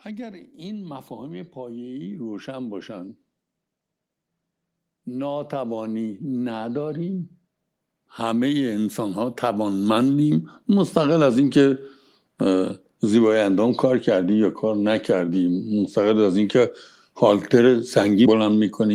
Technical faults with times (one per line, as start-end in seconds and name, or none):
0.05-2.92 automatic gain rising
5.04-7.29 automatic gain rising
7.96-11.38 automatic gain rising